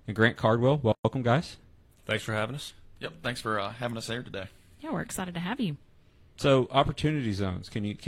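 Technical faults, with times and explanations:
0.92–1.05 s, gap at a join of encoded pieces: a 126 ms silence interrupts the speech, left by untrimmed encoder delay and final-frame padding; this shows as a flat waveform notch and a blank spectrogram column with smeared edges.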